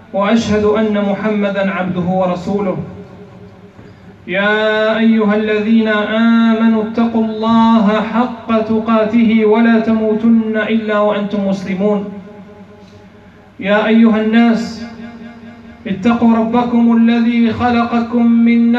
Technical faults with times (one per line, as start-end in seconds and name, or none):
none